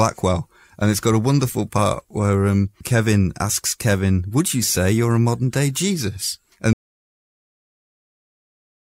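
At 6.73 s the speech cuts off abruptly and the clip stays silent until the end, about 2.1 s later, with no room tone or background noise left. This is an audio dropout to silence. The recording chain kept writing silence after the input stopped arriving, likely because the source device disconnected, a link failed or a mute was switched on, so whatever followed in the speech is simply missing.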